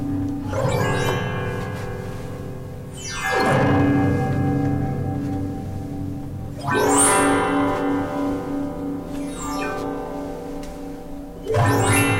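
Hard clipping shows up three times: from 3.34 to 4.76 s with the signal pushed about 8 dB past what a stage could pass, from 6.69 to 7.68 s at about 12 dB over, and from 11.55 to 12.18 s at about 7 dB over. In each stretch the peaks of these sounds get sliced flat, and those flat tops throw extra harmonics high up the spectrum, so the loud moments come across as crackly, fuzzy distortion.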